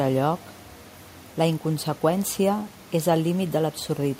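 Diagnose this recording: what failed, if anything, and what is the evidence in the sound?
Nothing failed in this recording; the only thing in the sound besides the speech is room noise sitting about 25 dB below it, which belongs to the recording space rather than any fault.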